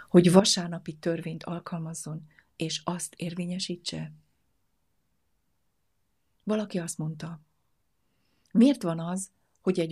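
At 0.40 s the speech and its background noise drop together by about 10 dB and stay there, a sudden gain jump likely caused by a gain change applied without a ramp.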